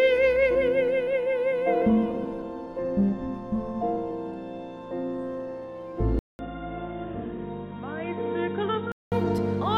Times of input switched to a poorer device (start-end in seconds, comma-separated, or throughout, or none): 6.19-9.12